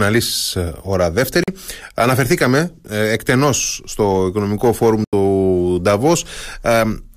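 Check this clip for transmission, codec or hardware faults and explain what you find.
Two short gaps break up the speech, and both are most likely Bluetooth dropouts. The likely cause is wireless packets reaching the headphones too late to play, so the output fell silent until good data arrived again. The first hole runs from 1.44 to 1.48 s, about 43 ms, which fits roughly two lost packets. The second, from 5.04 to 5.13 s, lasts about 85 ms, consistent with four. Each starts and stops abruptly or with a fade of a few milliseconds, and the speech resumes further along, as though it had carried on through the silence.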